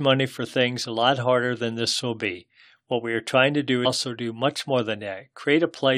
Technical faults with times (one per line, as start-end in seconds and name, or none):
0.11-5.97 clock slip clicks
3.84 stream segment skipped